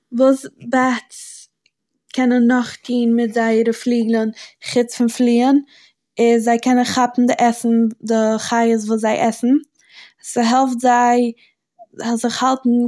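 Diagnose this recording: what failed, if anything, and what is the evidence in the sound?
Nothing failed; no fault is audible in this recording.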